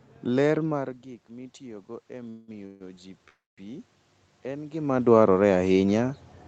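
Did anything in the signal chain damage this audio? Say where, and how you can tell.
Yes, two things in the call path. First, automatic gain rising in the call processing: from 0.65 s to about 4.93 s, just before "dwarore ahinya", the level of the sound and the room noise creeps up together, by about 8 dB in all. The input had dropped by about 17 dB, partly because the talker moved around 0.5 s, so the AGC slowly turned itself up to compensate. You can tell it's gain and not the talker because the background rises with the sound.

Second, three call audio freezes, at 2.29 to 2.51 s, 2.66 to 2.83 s and 3.28 to 3.61 s. In each one the last bit of sound gets smeared out into a fading buzz for about 186, 143 and 292 ms, and the third decays into about 210 ms of near silence. Afterwards the audio carries on from exactly where it stopped, so nothing is lost, but each gap pushes everything later. 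That pattern likely comes from the network: packets arrived late, the jitter buffer ran dry, and the decoder filled the gap with concealment until they showed up.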